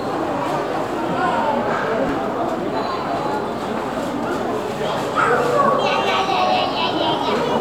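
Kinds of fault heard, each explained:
Repeated buffer: At 2.09 s, fresh audio failed to reach the output in time, so the device played its last 2.9 ms block twice more, which fits a buffer of about 128 samples. The tiny block is too short to register as a stutter and comes across as a brief click or buzz. On the waveform, the same short shape appears three times with hard joins. On the spectrogram, a narrow vertical smear of broadband energy marks the joins. Essentially no audio is lost.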